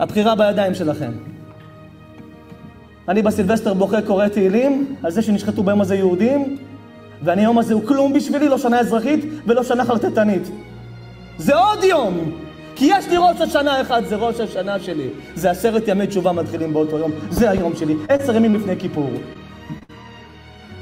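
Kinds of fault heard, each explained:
Short concealed packet loss: Little chunks of the stream didn't arrive in time, so the receiver patched each hole by carrying the last bit of sound forward and then blending back into the real audio. You get five quick smears or wobbles near the end, at about 18.05, 18.17, 18.51, 19.33 and 19.79 s, each covering 20 to 40 ms of missing audio, so short transients there can just drop out.
Burst of packet loss: Right after that last small dropout, at 19.83 to 19.91 s, a longer run goes missing, about 60 ms in all. The receiver again extends the preceding sound, fading it down as the gap stretches, so you hear a held buzz or fading hiss rather than the real material. When the audio picks back up, it has jumped ahead, and the stretch in between is simply gone.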